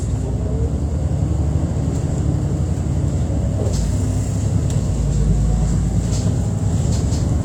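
Nothing technical stands out in this recording of sounds; there's no fault to report.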